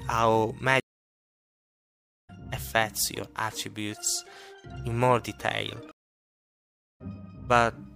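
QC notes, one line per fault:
0.80–2.30 s, stream reconnect: the audio drops to about 1.48 s of silence, then resumes roughly 1.5 s further on, skipping material. The connection broke, the player waited, reconnected and restarted its decoder mid-stream, picking up at the live position rather than where it stopped.
5.91–7.01 s, stream reconnect: same mechanism, with a shorter gap of about 1.08 s. Playback rejoins around 0.7 s later than where it cut off, so a short section of the stream is lost.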